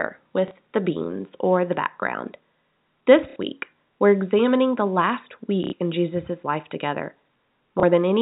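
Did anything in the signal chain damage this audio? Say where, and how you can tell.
Yes, packet loss with last packet repeated, at the network stage, at 0.48 s (just before "the beans or the"), 3.3 s (before "week we're examining the"), 5.64 s (after "we're examining the last") and 7.8 s. The gaps last 30, 60, 90 and 30 ms, which fits 30 ms packets. The receiver replays the last packet to fill each hole. The repeats ignore pitch period, and the longer runs stutter robotically at roughly 33 Hz, over the narrow telephone band of the G.711 call.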